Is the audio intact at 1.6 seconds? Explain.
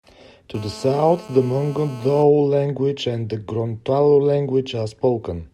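No. At 1.6 seconds the speech sits under a hard, raspy buzz that runs steadily from 0.54 to 2.23 s, ending just before "language and the", at about 20 dB below the speech. This is GSM phone buzz. A 2G phone on a call nearby transmits in bursts about 217 times a second, and the audio circuitry rectifies those radio pulses. The result is a 217 Hz tone rich in harmonics, unrelated to the speech.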